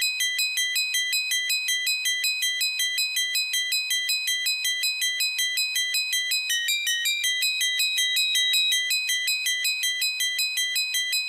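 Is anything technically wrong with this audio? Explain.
Yes. From 6.34 to 8.92 s there is loudspeaker feedback squeal: a pure tone at 3.8 kHz swells over roughly two seconds to sit about 5 dB above the sound. A microphone is hearing its own loudspeaker, and loop gain exceeds unity at that frequency.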